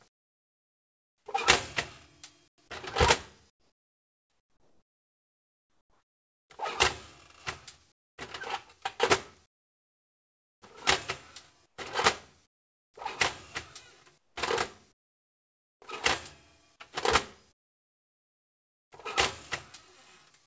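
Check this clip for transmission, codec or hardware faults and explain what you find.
One fault recurs through the clip: comfort noise in place of the background, heard over a call path whose sound stops at 8 kHz, which fits a wideband G.722 link at 64 kbps. The quiet stretches at 0.08–1.26, 2.48–2.58, 3.50–6.50, 7.92–8.18, 9.46–10.62, 11.66–12.94, 14.18–15.82 and 17.52–18.92 s drop to a flat, textureless hiss, about 13 to 24 dB lower than the surrounding background, before the real sound returns. The likely cause is discontinuous transmission: the sender stops coding during lulls, and the receiver generates roughly matched synthetic noise that carries none of the original detail.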